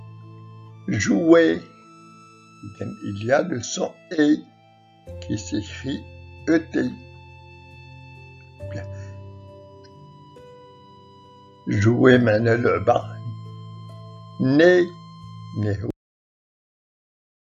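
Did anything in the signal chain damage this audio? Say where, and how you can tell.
Yes: a cut-off end at 15.90 s, where the sound stops mid-event into digital silence with no decay, because the final buffers were never written during storage.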